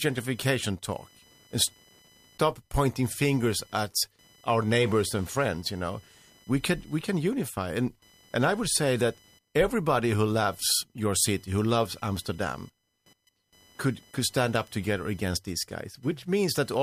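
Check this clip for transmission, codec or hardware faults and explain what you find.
There's one hardware fault, running the whole way through the speech. It's computer activity noise: a faint buzz pulsing around 1 kHz, roughly 35 dB under the speech, coming from processor, graphics card or mouse load disturbing the shared audio ground.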